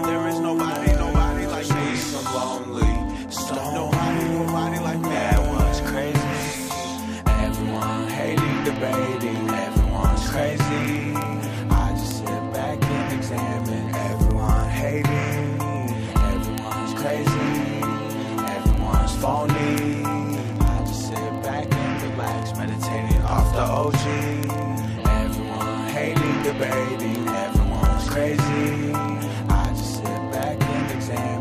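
Sharp, uneven ticks repeat about every 40 ms from 0.12 s to 31.4 s: word clock ticks from an unlocked digital link, with clocks differing by roughly 700 ppm and slipping one sample each time.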